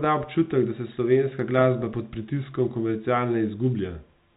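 No technical faults occur at any point in this speech, which is carried over G.711 telephone coding with nothing audible above 4 kHz.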